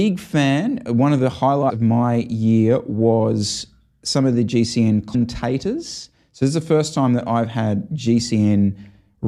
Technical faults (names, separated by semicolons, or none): compressed frames skipped